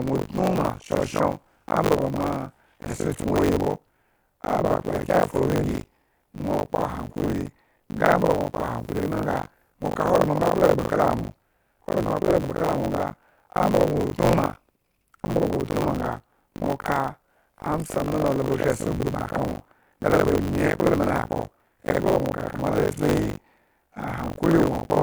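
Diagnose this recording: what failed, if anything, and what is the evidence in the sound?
The failure is at the driver and buffer stage: this is buffer tearing, and it runs the whole length of the speech. There's a steady robotic rattle at 50 Hz that rides on the voice and vanishes in the gaps, which fits a 20 ms period. The writer and the hardware reader have slipped, so roughly half of every period is stale audio from about 70 ms back, spliced in with hard edges each time.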